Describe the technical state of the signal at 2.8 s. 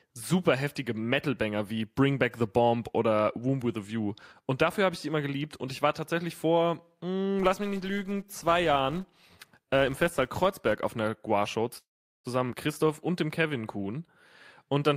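At 2.8 s the speech signal is intact, with no audible dropout, distortion, noise or other technical fault at that moment.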